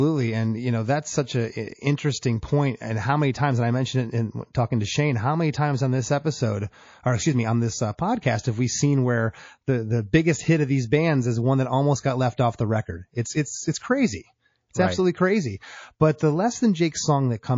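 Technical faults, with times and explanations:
Throughout: MP3 compression. The speech sounds watery and swirly, with a dull top end and smeared consonant onsets. The likely cause is heavy MP3 encoding, which fits about 32 kbps. Short of bits, the encoder cuts the treble and lets faint detail flicker between frames.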